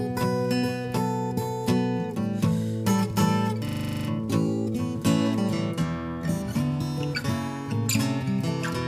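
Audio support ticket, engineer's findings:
System hang loop, 3.68–4.08 s. A 40 ms slice repeats exactly 10 times at a 25 Hz loop rate and is heard as a rough, machine-like stutter-buzz. The probable component is the host or driver stalling while the audio hardware keeps replaying its ring buffer. Little or no audio appears lost afterward. On the waveform, the identical 40 ms cycle tiles cleanly. On the spectrogram, a frozen spectral slice repeats with vertical seams every 40 ms.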